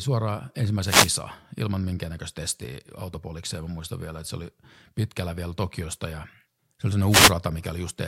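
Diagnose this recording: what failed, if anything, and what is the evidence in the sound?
The wireless microphone's analogue FM radio link failed. Two wireless microphone noise hits occur, from 0.85 to 1.12 s and from 7.09 to 7.33 s. The first ends just before "ilman minkäännäköistä testiä autopolikseen". Each is a brief burst of static. Reflections cancelled the carrier, so receiver noise rose.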